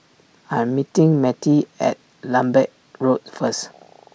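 Two sharp clicks land in the speech at 2.43 s and 3.48 s, most likely dropped samples, with just a handful missing each time so the waveform jumps abruptly.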